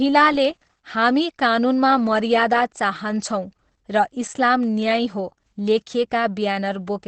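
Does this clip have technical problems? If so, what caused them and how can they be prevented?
Yes. The speech sounds muffled and hoarse the whole way through, with nothing above 8.5 kHz. That points to likely Opus compression dropping into its SILK speech mode, which fits a very low bitrate around 12 kbps that narrows the band. Encoding at a higher bitrate would keep Opus out of that wideband speech mode and preserve the top end.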